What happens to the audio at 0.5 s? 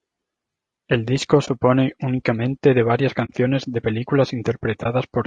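Low-delay AAC compression is audible at 0.5 s, as it is throughout the clip. The speech sounds rough and grainy, likely from AAC-ELD's short frames resolving pitch harmonics poorly and leaving noise between them, which fits a bitrate around 32 kbps.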